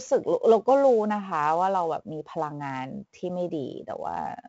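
Speech, with 4-bit ADPCM compression throughout: each sample is a coarse 4-bit step from a prediction, so a gritty hiss tracks every loud syllable and sharp onsets distort. Nothing is present above 7.8 kHz, which fits a 16 kHz sample rate at about 64 kbps.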